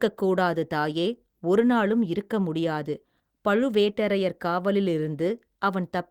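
Nothing stood out on listening to this speech recording.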